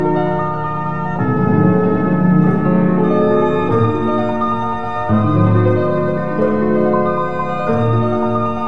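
The whole clip suffers from a wrong sample rate: everything runs about 1.38 times too fast and sits about 5.55 semitones too high, which fits audio captured at 16 kHz being played back at 22 kHz with no conversion. What separates this from a pitch-shift or time-stretch fault is that tempo and pitch move together by the same ratio, so the sound is both hurried and raised rather than altered in only one dimension.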